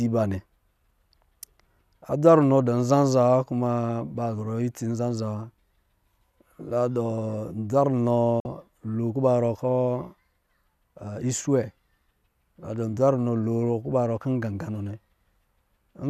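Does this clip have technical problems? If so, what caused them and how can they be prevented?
Yes. A digital broadcast dropout occurs from 8.40 to 8.46 s. The speech fades out within 3 ms and goes silent. The 48 ms gap fits two lost frames. The receiver muted until clean frames returned. Stronger reception or error protection prevents this.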